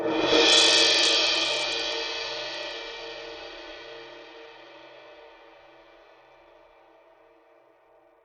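This music clip carries plainly audible damage throughout that points to likely Bluetooth SBC compression at a starved bit pool, fitting roughly 80 kbps. Treble flickers and drops out over a gritty, aliased haze, and a spectrogram shows patchy, blocky upper bands.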